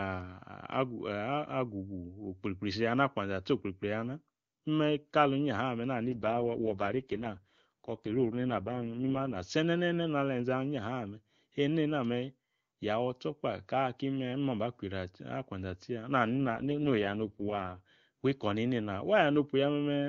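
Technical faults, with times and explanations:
6.06 to 9.36 s and 16.36 to 17.81 s, AMR rate drop: After "imme kali inyaha me" the speech turns rough, raspy and synthetic, clearing by "senenene na", then roughens again until just before "wi ikoni nena". The bandwidth holds and nothing drops out. The sound points to the link forcing the AMR-WB codec from its top 23.85 kbit/s mode down to 6.6 kbit/s, leaving too few bits to model the voice.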